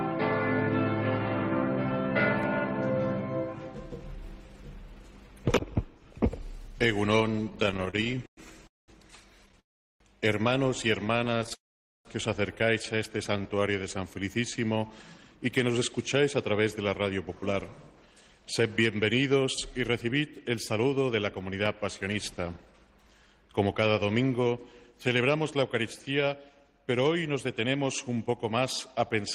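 From 7.36 to 11.52 s the audio suffers repeated stalls (stutter): 37 brief gaps, the longest 111 ms, add up to 484 ms of filled-in sound, about 12% of that span. Packets were arriving late, so the jitter buffer kept draining and the receiver extended the last sound each time. Nothing is lost; the sound just hitches and drags. Unlike a single freeze, the breaks are short, many and irregular, giving a jerky, sputtering pulse. Inside that stretch, and just after it, three longer call audio freezes stand out at 8.67 to 8.90 s (209 ms), 9.60 to 10.02 s (402 ms) and 11.54 to 12.07 s (507 ms). Each is likely caused by packets held up in transit until the buffer ran dry. The last sound is carried on briefly and then fades, leaving roughly 190, 380 and 460 ms of near-silence before the audio resumes exactly where it paused. That clean restart, with nothing skipped, separates a freeze from a dropout that loses content, and its length sets it apart from the stutter's tiny hiccups. 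From 11.05 to 13.60 s a jitter buffer slow-down follows as the receiver rebuilds its reserve. It repeats single pitch periods and slivers of pauses to add 76 ms, so the audio plays at 97% speed with its pitch unchanged, sounding slightly drawn out. A tape-speed or sample-rate error would drop the pitch as well. From 14.72 s to 29.22 s a jitter buffer speed-up does the reverse. The buffer was holding more than its target after delayed packets arrived in a bunch, so tiny pieces of one or a few pitch periods are cut again and again, removing about a second in all. Playback runs at 106% with the pitch held steady, giving a hurried, compressed feel, not the higher pitch a plain speed-up would cause.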